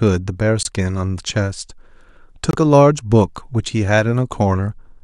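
At 0.63 s and again at 2.51 s the speech drops into sudden silence, gaps of about 32 ms and 45 ms, a corrupt frame muted each time: damaged compressed frames were rejected by the decoder and replaced with silence, leaving abrupt holes while timing stays intact.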